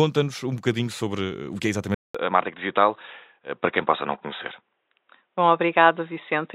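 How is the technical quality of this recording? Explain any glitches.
The recording has one clear glitch: from 1.95 s to the end, the speech loses its top end and sounds dull and boxy. The change follows a silence of about 200 ms and then holds, with nothing left above 3.8 kHz, a faint new background noise far below the speech, and loudness about the same. That pattern points to an input switched to a poorer device, likely a fallback microphone or headset call profile. A bandwidth-limiting filter alone would not add the silent gap or alter the noise floor.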